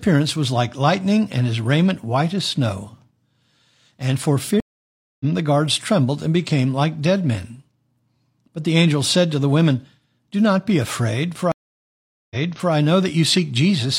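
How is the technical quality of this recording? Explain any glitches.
The recording has two stream reconnect glitches. Each time, the connection dropped and the player restarted its decoder mid-stream. That leaves a gap of silence, and the speech resumes from a different point rather than continuing where it stopped.

From 4.60 to 5.25 s there is about 0.6 s of silence. The speech then picks up roughly 0.4 s further along, so a short stretch is skipped, as happens when a live stream moves on without the listener.

From 11.52 to 12.72 s the silence lasts about 0.79 s. This time the speech resumes 0.42 s earlier than where it cut off, because the server resent a burst of buffered audio. A short piece of speech is therefore heard twice, and the restart comes in softly as the new decoder's first frame fades in.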